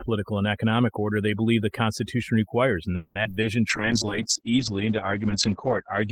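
From the start to the end of the speech, the background sits in near silence broken by twinkling specks, and the voice comes across with its softer edges eaten away. That is overdone noise removal: the suppressor was set so aggressively that any frequency band close to its noise estimate was pushed almost to nothing, and quiet detail in the voice was treated as noise and stripped out along with the hiss.

Just after "requires and", from 2.95 to 3.45 s, the sound turns choppy, with a handful of short holes in quick succession. This is repeated packet loss, heard as robotic sound. Each missing chunk was papered over by stretching the previous sound forward, about 260 ms in all, roughly half the stretch, with the longest gap lasting 200 ms. Another 60 ms simply drops out.

From 3.7 s to the end, the speech goes muffled and rough, and the top end disappears, with the audible bandwidth falling from 20 kHz to about 8 kHz. 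The dullest, coarsest stretch lasts about 2.1 s. The sound points to a call bitrate drop, from around 32 kbps to about 10 kbps. The connection's bandwidth estimate fell, so the encoder had far fewer bits to work with, quantised more crudely and cut the high frequencies to save space.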